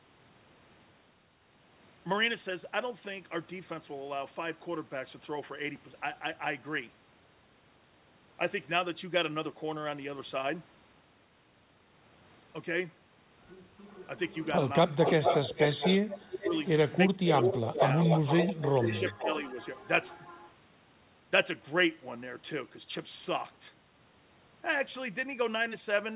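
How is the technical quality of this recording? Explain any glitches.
The recording has clear problems in its second half. The audio is band-limited, with nothing above 4 kHz, which fits a G.711 A-law call at 64 kbps. Two call faults stand out.

Echo leak appears from 13.89 to 14.46 s, 15.05 to 16.97 s and 17.28 to 20.51 s. A delayed copy of the speech returns 418 to 434 ms late. It starts faint, about 25 dB down, then grows to about 5 dB below the talker. The likely cause is a loudspeaker echo that the far end's canceller failed to remove.

Speech suppressed in double talk occurs at 14.96 to 15.22 s, 16.31 to 16.52 s, 17.13 to 17.75 s and 18.81 to 19.56 s. The talker's level dips sharply, by roughly 10 to 25 dB, in short pieces. The echo canceller likely could not separate the talker from the echo and turned both down.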